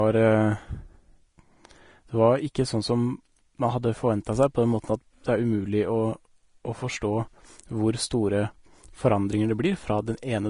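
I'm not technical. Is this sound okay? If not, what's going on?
No. From start to finish the speech sounds hissy and grainy, with a dull top where nothing above about 10.5 kHz remains. This is likely Vorbis compression at a low setting: fine treble detail gets replaced by rough noise, and crisp consonant edges blur.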